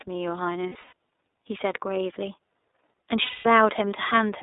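The whole clip carries the iLBC codec. Speech sits in a narrow 300 Hz to 3.7 kHz band. Each 30 ms frame is coded on its own, which fits iLBC's 13.33 kbps mode. The damage is plainly audible: the voice sounds rough and slightly synthetic.

From 0.69 to 0.93 s, lost iLBC frames break the speech. About 150 ms goes missing, scattered across 240 ms. The longest gap is near 70 ms. The decoder repeats the last pitch cycle with added noise, so each gap sounds like a brief buzzy, held vowel. From 3.23 to 3.46 s, a single 210 ms loss follows, which points to seven frames. The concealment buzz fades as it goes. Clean speech returns almost at once, because the frames don't depend on each other.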